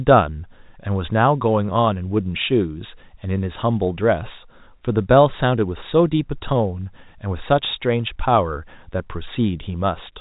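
Speech carried over G.711 A-law telephone coding, with nothing above 3.8 kHz, and nothing technically wrong with it.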